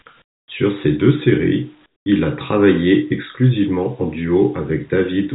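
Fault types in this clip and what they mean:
Comfort noise in place of the background: the sending side likely stopped transmitting during pauses in the speech, so the receiver filled the gaps with synthetic noise. From 0.22 to 0.48 s and from 1.86 to 2.06 s, the real background gives way to a smooth, featureless hiss, about 23 dB and about 12 dB quieter than before. The ambient detail vanishes, then returns when sound resumes, all within a band that stops at 4 kHz on this call path.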